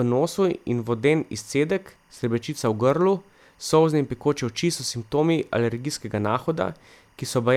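Timecode bleed runs under the speech for the whole clip: linear timecode from an adjacent track or cable has leaked into the audio path. Its square-wave code flips between two pitches, around 1 and 2 kHz, producing a steady chirping warble behind the speech. The bleed sits low, at about 40 dB below the programme, and its chatter rate suggests 23.976 fps code.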